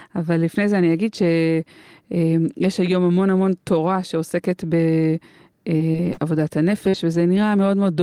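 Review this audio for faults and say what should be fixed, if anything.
Repeated packet loss (robotic sound) runs from 5.77 s to 7.37 s of this speech. Four short holes open in the stream, the longest 42 ms, totalling about 120 ms. Each is bridged by stretching the sound that came just before, so around 200 ms ends up rebuilt, with about 8% of the stretch concealed. The repeated patching gives the choppy texture with pieces missing. To prevent it, stabilise the network path and enlarge the jitter buffer.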